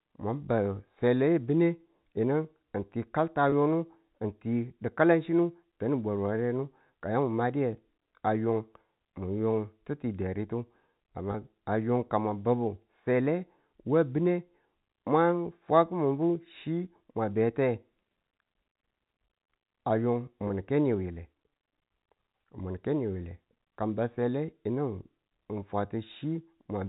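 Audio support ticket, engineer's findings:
Packet loss with pitch repetition, three dropouts: 3.50–3.52 s, 11.32–11.34 s, 20.48–20.50 s. Each is a brief held, buzzy sustain of about 20 ms, which fits a single lost packet. The receiver's concealment loops the last pitch period across the gap, fading it, then cross-fades back into live signal. The band-limited G.711 telephone path is audible throughout, with no coding damage heard. Component: network transport/jitter buffer.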